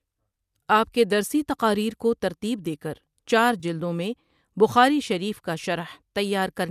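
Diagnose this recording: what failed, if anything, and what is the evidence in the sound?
A brief smeared, noisy and phasey patch sits between 3.60 and 3.65 s, just after "کو ترتیب دیکر چار" and just before "میں بخاری شریف کا". This is AAC frame loss with concealment at the codec and network stage. Roughly 30 ms of coded audio never reached the decoder, which fits about three lost low-delay frames, likely from an AAC-ELD stream. The decoder filled the gap by reusing the last good spectrum with scrambled signs or interpolated energy, so the sound goes blurred instead of cutting out.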